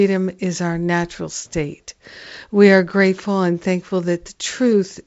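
The speech comes through G.722 wideband telephone coding at 64 kbit/s with no faults to report, its content stopping at about 7.7 kHz as that coding path allows.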